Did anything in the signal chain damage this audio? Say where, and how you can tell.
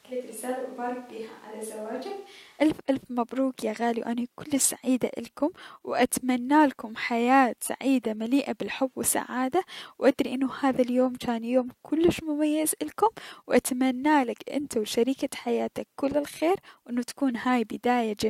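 Yes. The close microphone is likely missing at the capture stage, so from the start until 2.6 s a distant microphone is used. The speech sounds hollow, roomy and thin in the bass, about 10 dB quieter, with room noise only about 25 dB below it, until the sudden switch before "الف الف مبروك يا".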